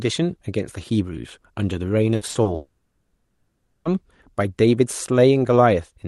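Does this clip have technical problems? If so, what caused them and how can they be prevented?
Yes. From 2.15 to 2.47 s the speech turns choppy and robotic. This is repeated packet loss: four gaps, the longest 60 ms, were each patched by stretching the previous sound. Preventing it takes a steadier connection, forward error correction, or a larger jitter buffer.

From 2.55 to 3.87 s the sound briefly buzzes, falls silent for about 0.93 s, then returns with roughly 1.3 s missing. The likely cause is a long network dropout. Prevent it with a more reliable network link, such as wired instead of congested Wi-Fi.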